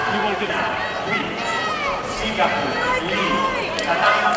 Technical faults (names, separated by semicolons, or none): skip ahead; jitter buffer speed-up